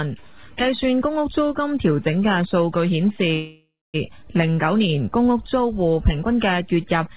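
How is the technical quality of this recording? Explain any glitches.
The recording has one clear glitch, a call audio freeze, on top of call-quality audio that shows nothing above 4 kHz, consistent with a G.711 mu-law call codec. From 3.34 to 3.96 s the sound stalls for about 0.6 s: a fading buzz or hiss, then roughly a quarter-second of silence. The likely cause is delayed packets emptying the jitter buffer. Playback then resumes where it stopped, losing nothing but running later. A spectrogram shows smeared, decaying bands, then a blank column.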